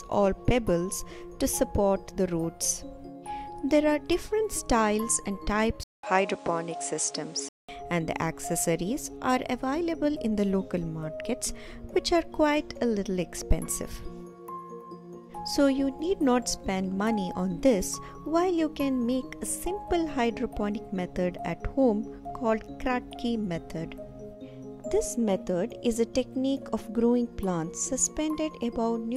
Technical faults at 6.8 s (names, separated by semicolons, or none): input switched to a poorer device